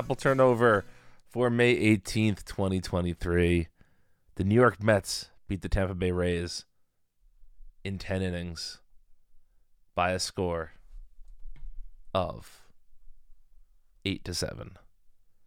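Nothing stood out as a technical problem on listening to this speech recording.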